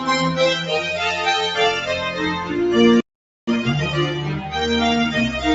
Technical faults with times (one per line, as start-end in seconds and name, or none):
3.00-3.47 playback stall
3.47-3.93 time-compressed catch-up
4.33-4.53 sound cut by the noise suppressor